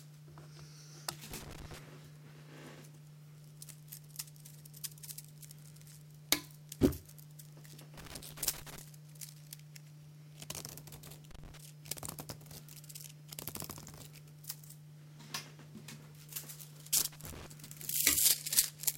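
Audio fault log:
1.31–17.46 s, loose connector crackle: four irregular bursts of crackle and scratching, at 1.31–1.78 s, 7.98–8.81 s, 11.31–11.57 s and 16.98–17.46 s, each lasting between about a quarter and just under a second. A worn or dirty contact in the signal path is briefly moving and repeatedly making and breaking, so the audio is chopped on and off in rapid, uneven bits. Any DC present on the line turns each break into a pop, which adds pops to the crackle.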